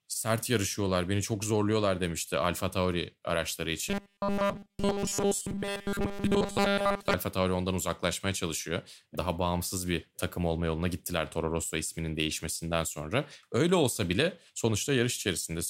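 From 3.89 to 7.14 s the speech turns into a robotic sound from repeated short buffers: a stiff, metallic buzz fixed at 200 Hz. Essentially nothing new gets through, likely because the same 5 ms chunk keeps looping while fresh audio is skipped.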